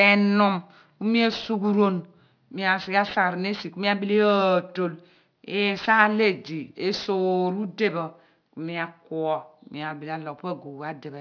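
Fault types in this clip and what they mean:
Aliasing: The speech was moved to a lower sample rate with no filter first, which fits a rate of about 11 kHz. Everything above 5.5 kHz folds back below that edge. Sibilants sound gritty and metallic, with folded energy roughly 20 dB under the speech.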